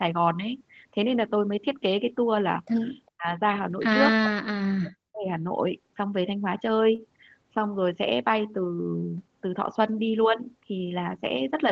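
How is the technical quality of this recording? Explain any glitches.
The recording has three kinds of glitches typical of a voice call. The speech has nothing above 8 kHz, which fits a call codec like Opus at roughly 20 kbps.

Echo leak, 3.06 to 3.10 s. A very faint delayed copy of the speech slips through, about 35 dB below the voice. It arrives 405 ms late. This is likely a loudspeaker on the far side feeding its microphone, with the echo canceller missing a fragment.

Speech suppressed in double talk, 3.10 to 3.31 s and 4.24 to 5.28 s. The voice drops sharply, by around 40 dB at its deepest, for about 1.2 seconds in total. The likely cause is an echo canceller that heard both sides at once and turned everything down.

Short stall from a late packet, 6.95 to 7.00 s. One sound is held 31 ms too long, with a slight buzz or dip. A packet arrived late and the receiver stretched the last sound to fill the gap. 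Nothing is lost, but the timing shifts by 31 ms.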